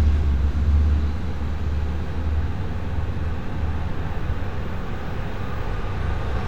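No technical faults can be heard in this audio.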